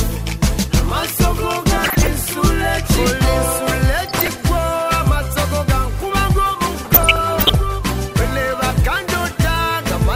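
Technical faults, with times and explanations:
1.77–2.07 s, 4.06–4.43 s and 6.85–7.55 s, DAB burbling: three bursts of burbling over the programme, the last and longest lasting about 0.7 s. Weak reception lets a bit error rate of roughly 0.5 to 0.7 percent slip past error correction into the MP2 stream. Corrupted samples then put short noise blips into individual sub-bands, and corrupted scale factors make sub-bands leap in level for up to a frame, so the damage comes as rapid, band-limited blips.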